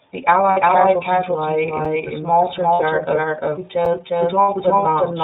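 Throughout, the speech is narrowband iLBC. Nothing above 4 kHz comes through, and the voice sounds rough and slightly synthetic. The damage is plainly audible. It fits the 13.33 kbps mode with 30 ms frames.

Also throughout, a doubled audio track trails the speech. A second full-band copy arrives about 400 ms late at roughly equal level. It is dry, with no room colour. This is likely a second capture of the same audio through a slower path.

From 0.50 to 0.58 s, just before "casualties lie", lost iLBC frames cover about 60 ms. The decoder repeats the last pitch cycle with added noise. It sounds like a held, buzzy vowel. Clean speech returns almost at once.

At 1.85 s, between "casualties lie" and "the small", there is a gap between chunks. It is a 7 ms hole of silence. The audio arrives in 2-second chunks.

From 2.74 to 2.81 s, just after "the small", lost iLBC frames fill about 60 ms with the same buzzy held tone. 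The voice recovers immediately.

At 3.85 s, another 7 ms gap between chunks falls on the next 2-second join.

From 4.43 to 4.49 s, lost iLBC frames again leave about 60 ms of concealment, heard as a brief breathy hold.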